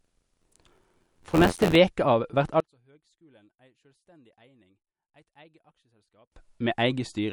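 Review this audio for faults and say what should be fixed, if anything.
Throughout, a low-bitrate MP3 encode likely cut the treble and starved weak detail, leaving the speech watery and dull; the damage points to roughly 48 kbps. Encode at a higher bitrate or keep a lossless master.

From 0.00 to 1.76 s, just before "av vert", buffer tearing occurs: the writer and the hardware reader of the ring buffer slipped, splicing roughly a tenth of old audio, about 40 ms stale, into each period. This produces an 86.1 Hz robotic buzz that fits a 512-sample buffer. Keep the writer ahead of the hardware pointer, with enough latency margin that they never cross.

From 2.60 to 6.32 s, right after "av vert", one channel is likely inverted in polarity, so summing to mono cancels the centred speech, dropping it by about 34 dB to a faint residue. Check and correct polarity on each channel before any mono fold-down.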